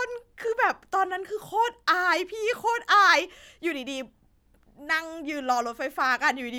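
No technical faults can be heard anywhere in this recording of speech, which carries through without interruption or damage to the signal.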